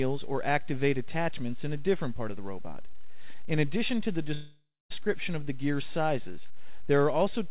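From 4.34 to 4.92 s comes a call audio freeze, likely from packets held up until the jitter buffer ran dry. The last sound stretches into a fading buzz, then about 220 ms of silence, and resumes exactly where it stopped. Unlike packet loss, nothing is missing; everything afterwards simply lands about 560 ms late, over a band that stops at 4 kHz, consistent with G.711 mu-law at 64 kbps.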